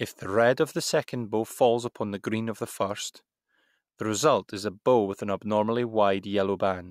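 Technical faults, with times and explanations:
Nothing stood out on listening to this speech recording.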